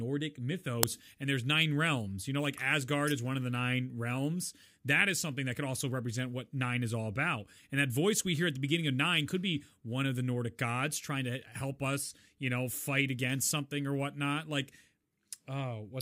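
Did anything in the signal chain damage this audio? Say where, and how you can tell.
Yes: an uninitialised buffer at 0.83 s, just before "and there's nine realms", in the driver or buffer stage. A block of about 1.33 ms, which fits a 64-sample buffer, went out before audio was written to it, so stale memory played as a brief, loud crack.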